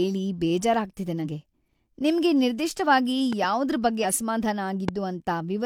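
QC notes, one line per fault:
1.21–1.25 s and 4.00–4.06 s (after "ನಿಮ್ಗೆ ನಿರ್ದಿಷ್ಟವಾಗಿ ಯಾವುದ್ರ್"), damaged data in a compressed stream: the decoder misreads corrupt frames and resyncs, giving a brief disruption. A spectrogram shows smeared broadband blocks, and the waveform shows a discontinuity.
3.33–3.46 s (after "ನಿಮ್ಗೆ ನಿರ್ದಿಷ್ಟವಾಗಿ") and 4.88–4.91 s, loud pop: two pops about 10 dB above the sound, then one about 15 dB above. Each is likely a voltage step or pulse from a switch, plug or static. The waveform shows sharp spikes, and the spectrogram shows thin vertical full-band lines.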